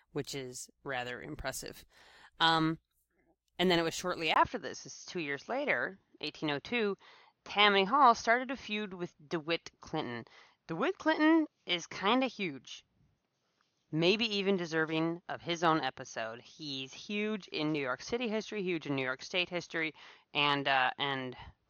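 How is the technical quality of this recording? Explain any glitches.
The recording has one clear fault: the sound abruptly changes character partway through and stays changed to the end. This is most likely an input switched to a poorer device, starting at 4.34 s just after "then it was shortly." A gap of about 20 ms marks the switch. From there on, nothing above 6.5 kHz gets through, so the speech turns dull and boxy. The loudness stays about the same, but a faint new background noise appears, roughly 50 dB below the speech.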